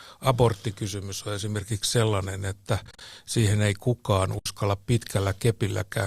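Around 2.85 to 3.01 s there's AAC frame loss with muting. About 100 ms of sound drops out, scattered across 160 ms as short gaps, the longest roughly 40 ms. The decoder zeros the missing frames, and the overlapping windows fade each gap out and back in, so you hear soft-edged holes. The gap sizes fit 10 ms frames, which points to the low-delay AAC this was likely sent over. Then at 4.39 to 4.46 s there's a second hole, 70 ms lost in all, with the same soft fade at both ends.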